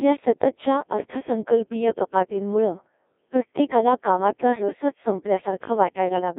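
From the first moment to the end, the whole speech track has gone through a Codec 2 vocoder, and it's pretty badly mangled. What's coming out isn't the original waveform at all. The decoder rebuilds the voice from sine waves using only pitch, voicing, energy and a rough spectral outline, so it sounds robotic and buzzy. The damage level fits something around 1.6 kbit/s, and it's squeezed into a radio-style band of roughly 250 Hz to 3.6 kHz.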